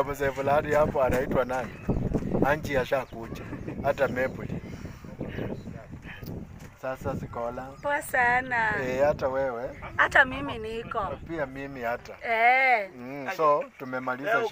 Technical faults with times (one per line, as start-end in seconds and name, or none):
none